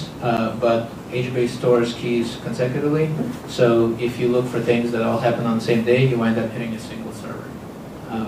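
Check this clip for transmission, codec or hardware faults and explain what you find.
One fault: a block of digital silence at 0.37 s. The program apparently failed to fill its output buffer in time, so about 10.7 ms of samples became zeros, which fits a 512-sample buffer. The abrupt cut and return produce a brief tick or dip.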